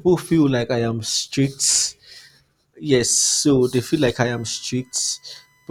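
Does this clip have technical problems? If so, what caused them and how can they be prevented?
Yes. A USB whine appears at 4.34 s and runs to the end of the clip at 5.71 s. It is a steady, fixed-pitch tone built on 1 kHz, strongest at its 2 kHz harmonic, and faint, about 40 dB below the speech. The USB bus draws current in 1 ms frames, and that pulsing leaks through shared power or ground into the audio path. Mains hum, by contrast, sits at 50 or 60 Hz and its low multiples. To prevent it, power the interface separately or use a ground-isolated USB hub.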